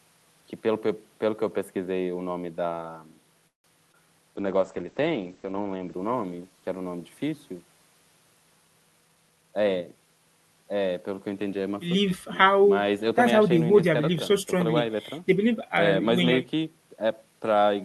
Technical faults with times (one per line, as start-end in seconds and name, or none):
3.47-3.66 call audio freeze
3.92-3.96 short concealed packet loss
4.37-8.20 call bitrate drop
9.02-9.82 jitter buffer speed-up